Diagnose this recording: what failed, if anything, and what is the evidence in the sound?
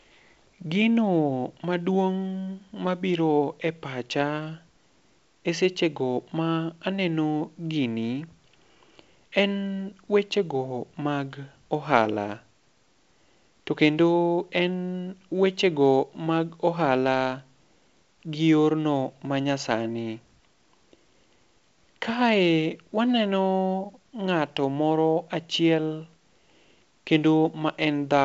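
Nothing stood out on listening to this speech carried over G.722 wideband telephone coding at 64 kbit/s.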